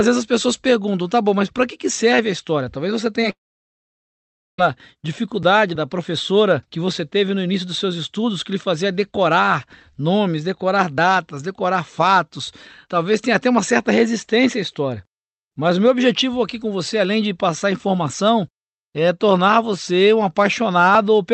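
At 3.21 s there is a short concealed packet loss: about 10 ms of the speech never reached the decoder in time, and the receiver patched the gap by extending the preceding sound and blending back into the real signal. It comes across as a tiny smear or wobble rather than a gap. Unlike a dropout, there is no silence; the flow of speech continues almost intact.

From 3.30 s to 4.59 s the audio drops out for about 1.28 s, most likely a long network dropout. The receiver continues the last sound only briefly as a fading buzz or hiss, and then roughly 1.23 s of silence follows before the speech returns, with the missing stretch simply gone rather than delayed. The long silent hole and the skipped content distinguish it from the brief smear a moment earlier. Throughout the clip the top end stops at about 8 kHz, consistent with an Opus call codec running near 48 kbps.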